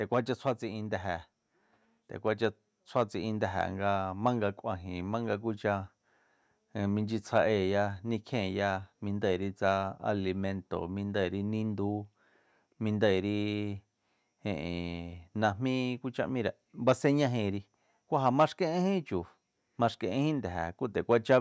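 From 0.61 s to 15.28 s the level climbs steadily, an automatic gain rising fault. The automatic gain control judged the input too quiet and kept raising its gain slowly, ending about 6 dB higher over roughly fifteen seconds. Because the gain acts on the whole signal, the speech and the background noise swell together. The result is a gradual loudening rather than a step, within a call-processed band that stops at 8 kHz.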